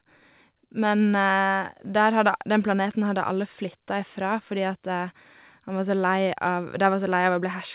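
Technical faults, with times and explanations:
No technical faults heard.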